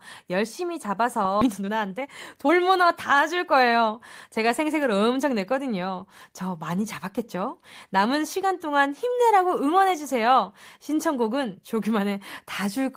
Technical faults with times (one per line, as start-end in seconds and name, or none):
1.41-1.43 skip ahead
1.44-3.89 jitter buffer speed-up
4.29-5.31 jitter buffer speed-up